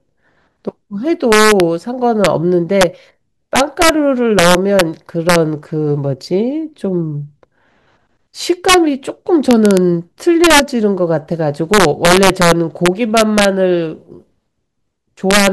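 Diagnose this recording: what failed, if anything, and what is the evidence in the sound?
Integer overflow in sample-format conversion. Loud speech peaks crack violently throughout. Driven about 5 dB over, a small fraction of samples wrap to the opposite sign.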